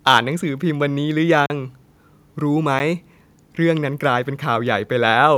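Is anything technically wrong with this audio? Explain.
Yes. From 0.07 to 0.18 s the loudest speech peaks are flattened, giving a harsh, crackling edge. That is most likely microphone overload: input gain about 3 dB too high drove a small fraction of samples into the converter's ceiling. Unlike codec distortion, the harshness appears only on peaks.

There are two blocks of digital silence, a 40 ms hole from 1.46 to 1.50 s and a 10 ms tick at 2.79 s. Samples drop abruptly to silence and return with no fade, which fits an output buffer that wasn't filled in time rather than a faded network dropout.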